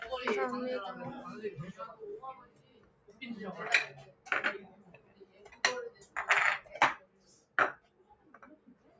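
A recording of everyday sounds, band-limited to nothing above 8 kHz by call microphone processing, has a noise suppressor applied to music or sounds. The suppressor treats steady sound as noise. Level swings by roughly 20 dB, so the sound pumps and thins. Sudden onsets pass, while held parts sink. Sound is cut by the noise suppressor at 2.4–3.21 s, 4.1–4.26 s, 4.71–5.58 s, 5.91–6.15 s, 6.99–7.57 s, 7.77–8.39 s and 8.56 s to the end. Most dips reach about 11 dB. The one at 5.91 s reaches about 9 dB. Decays are cut short.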